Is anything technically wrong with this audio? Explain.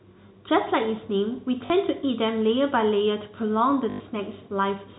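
Yes. The speech has packet loss with the last packet repeated, at 1.66 to 1.70 s (40 ms) and 3.90 to 4.00 s (100 ms). Each gap is filled by replaying the last received packet. The repeats ignore the pitch. The longer gap buzzes at about 50 Hz, which fits 20 ms packets, and is heard as a brief robotic stutter.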